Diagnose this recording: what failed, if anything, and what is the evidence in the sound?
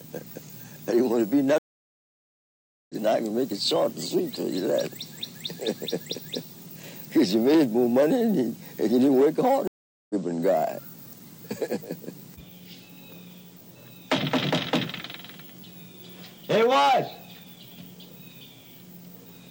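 The network stage failed: a stream reconnect, heard twice. The audio drops out at 1.58 s and returns at 2.95 s, after about 1.3 s of silence. It drops again at 9.67 s and returns at 10.15 s, after about 0.42 s. Each time the sound resumes further on, roughly 0.7 s later in the first case and roughly 0.4 s in the second. The connection broke, the player reconnected, and a fresh decoder picked up the live stream mid-flow.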